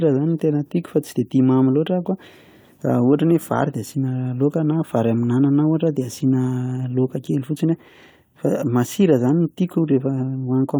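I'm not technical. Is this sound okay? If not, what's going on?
Yes, nothing in this speech recording sounds technically wrong. There's nothing here that needs fixing.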